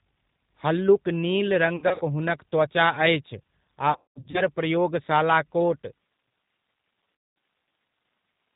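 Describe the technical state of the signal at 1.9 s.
At 1.9 s the sound falls inside VoIP packet loss concealed by the speech codec, running from 1.76 to 2.03 s. About 150 ms went missing across 240 ms, with gaps up to 60 ms. The decoder stretches its last pitch and filter into a buzzy tone or coloured noise that fades, visible as a sagging waveform envelope. Underneath, the G.729 codec at 8 kbit/s sounds plainly rough and synthetic, with a spectrogram that is empty above 4 kHz.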